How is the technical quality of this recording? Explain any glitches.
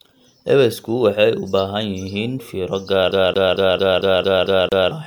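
The recording has two problems: a coarse, degraded texture across the whole clip, and a mechanical stutter near the end.

Throughout, the speech sounds swirly and hollow, with a watery smear and softened consonant attacks. The spectrum stops at about 20.1 kHz. This is likely generation loss: the audio seems to have been passed through a lossy codec several times, fitting repeated MP3 encoding at around 128 kbit/s, perhaps four passes. Each re-encode quantises on a shifted frame grid, so the noise and spectral gaps build up beyond what one pass would leave.

From 3.11 s to 4.91 s, right after "fiiro gaar", the speech turns into a rapid, even stutter. A fragment about 225 ms long plays eight times in a row, with a brief dropout at each restart. This is the CD stuck on one turn fault. A scratch sends the laser back one track at the same spot on each rotation, so the same short stretch repeats at a steady rate until playback breaks free.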